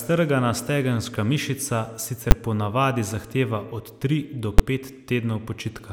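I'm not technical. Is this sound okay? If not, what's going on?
No. In this speech you'll hear two sharp, very loud bangs, at 2.31 s (between "stegenska mišica" and "ponavadi zahteva") and at 4.59 s. These are invalid numbers at full scale: a calculation broke down and pushed the sound to one extreme value, far beyond the speech's normal peaks, for a brief 10 ms moment.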